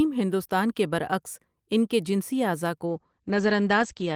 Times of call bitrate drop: 2.86-4.16

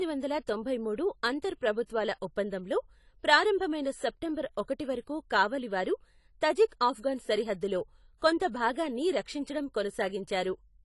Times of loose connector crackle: none

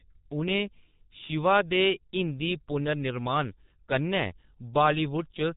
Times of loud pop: none

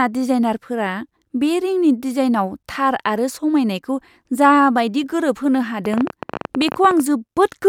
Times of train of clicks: 5.85-7.01

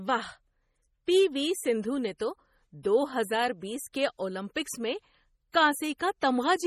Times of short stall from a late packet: none

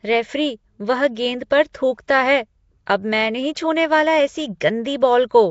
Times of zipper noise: none

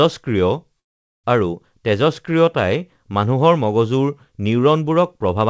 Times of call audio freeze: 0.80-1.26

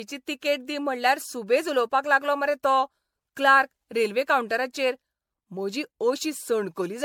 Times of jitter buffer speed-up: none

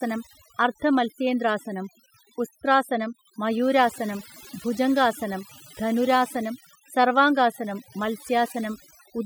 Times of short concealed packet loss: none

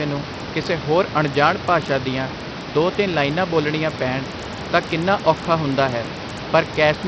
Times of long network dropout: none

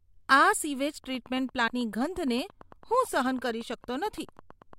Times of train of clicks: 1.04-4.74

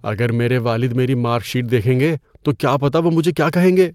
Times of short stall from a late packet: none

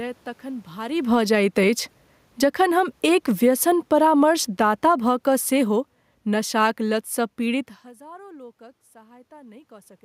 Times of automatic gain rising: 1.26-2.02, 7.99-9.99

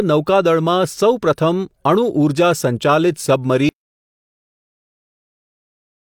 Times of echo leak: none

